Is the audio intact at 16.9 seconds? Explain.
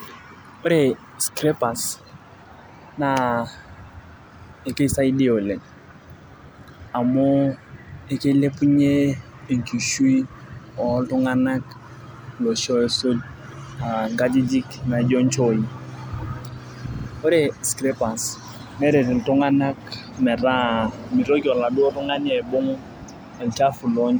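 No. From 16.94 to 17.05 s there are repeated frames: a 52.2 ms block replays twice more, adding 104.5 ms, so the speech stutters before "ore scrappers neret". A spectrogram shows identical slices repeated.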